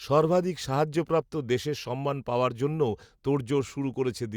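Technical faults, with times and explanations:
No technical faults can be heard in this speech recording. Nothing in it calls for a time or an explanation.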